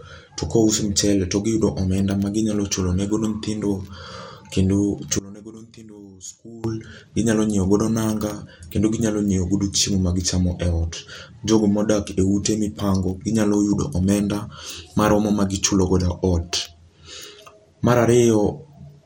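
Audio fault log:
Throughout: MP2 compression. The speech has a dull, gurgling, grainy edge, and nothing comes through above 16.8 kHz. That's what you get from MPEG Layer II running short of bits: the upper sub-bands get switched off, and the bands that survive are coarsely quantised, so detail flickers and turns granular. The damage is plainly audible, which fits a low rate of around 80 kbps. The likely cause is an MP2 encode somewhere in the chain.
5.19 to 6.64 s: one channel inverted. For about a second and a half the voice drops out to a faint ghost, roughly 21 dB down, then snaps back right before "ginyalo nyiew godo". The likely cause is one side of the stereo pair flipping polarity. When the channels are summed to mono, the centred voice they share cancels almost completely, and all that's left is the small difference between them.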